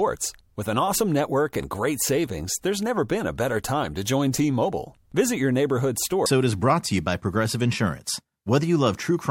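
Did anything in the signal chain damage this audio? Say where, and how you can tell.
Yes. At 6.25 s, right after "your neighborhood", the speech jumps ahead with a small blip and a chunk of the programme is simply gone. That's most likely a stream segment skipped: one segment failed to load over the network, and the player carried on with the next.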